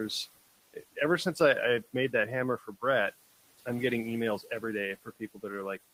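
A noise suppressor runs throughout this speech clip, cutting what it judges to be steady noise by about 16 dB frame by frame. The noise drops away in pauses and swells back under speech. The room noise itself sits about 20 dB below the speech.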